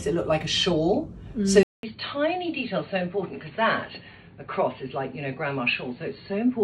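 At 1.63 s the audio drops out for about 200 ms and comes back dull and boxy, with nothing above 4.5 kHz, a bit quieter, and a faint new hiss underneath until the end. That's likely the input switched to a poorer device.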